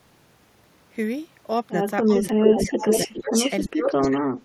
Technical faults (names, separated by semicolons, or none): speech suppressed in double talk; echo leak